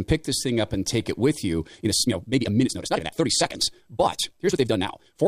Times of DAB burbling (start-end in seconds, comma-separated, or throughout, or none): none